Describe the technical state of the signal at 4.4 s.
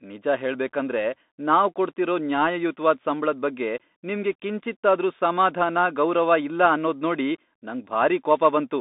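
At 4.4 s the speech is passing through a Bluetooth CVSD headset codec, which runs across the whole clip. Each sample is coded as a single up-or-down bit with an adapting step size, consistent with a 64 kbps stream. The line carries only about 200 Hz to 3.7 kHz, with nothing above 3.8 kHz, so the speech sounds narrow and telephone-like. The damage is plainly audible: s sounds come out scratchy, loud high content distorts where it outruns the step, and a granular hiss sits underneath.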